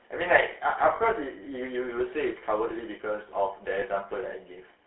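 Throughout, the speech carries GSM full-rate codec damage: the coder rebuilds the voice from a vocal-tract model excited by a sparse, regularly spaced pulse train. This is heard as a buzzy, gravelly roughness within a 300 Hz to 3.4 kHz band, consistent with the 13 kbps full-rate coder.

Lost GSM frames occur from 0.96 to 1.01 s (40 ms, fitting two 20 ms frames) and from 3.80 to 3.83 s (one frame's worth). The decoder repeats the last good frame's parameters, leaving a brief rough, metallic ring.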